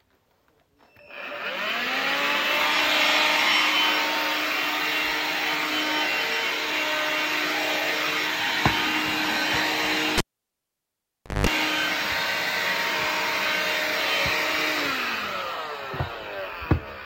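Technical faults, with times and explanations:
10.18 to 11.47 s, cable pulled and plugged in: a sharp pop as the live lead comes out, then near silence for about 1.24 s while nothing's connected. As it goes back in, only the plug tip touches at first, so the open input picks up a 185 ms burst of 50 Hz mains buzz. Then the sleeve seats, the ground connects, and a second pop marks the sound coming back.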